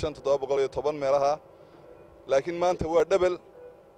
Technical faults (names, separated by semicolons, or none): dropped buffer (overrun)